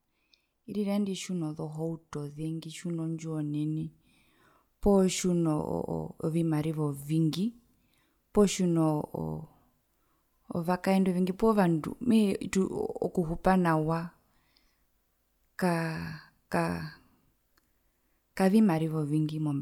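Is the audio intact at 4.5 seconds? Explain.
Yes, the speech at 4.5 seconds plays through cleanly, with no dropout, click, distortion or other fault at that moment.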